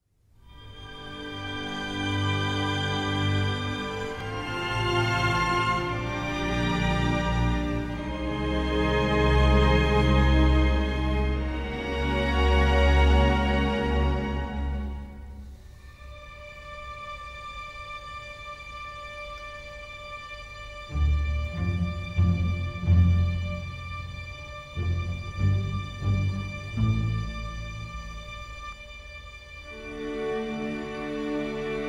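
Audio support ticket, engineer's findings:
Rough, slightly doubled tone from 28.73 s to end of clip (31.89 s). Channel delay (comb filtering): one channel lagging the other by around 20 ms before mono sum, giving fixed, closely spaced notches starting down near 20 Hz. Check summing/buffer path.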